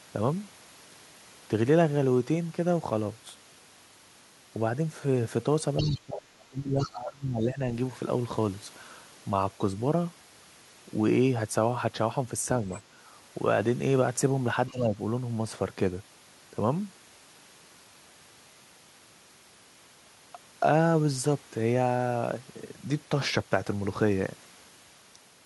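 At 5.77 to 5.99 s and again at 6.79 to 6.98 s, a faint second voice slips in behind the speech, roughly 15 to 20 dB down, with another brief scrap at 12.74 to 12.82 s. This is the other side's voice leaking through, likely loudspeaker echo that the canceller failed to remove from the microphone. From 5.8 to 7.6 s, the main talker dips and breaks up in pieces, sinking by some 25 dB at worst. A milder, briefer dip follows at 14.7 to 14.98 s. Both are speech suppressed in double talk, likely the echo canceller turning everything down while both sides spoke at once.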